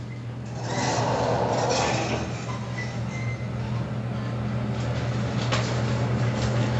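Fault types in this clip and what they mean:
No technical faults can be heard in this recording of sounds. There is nothing here to list.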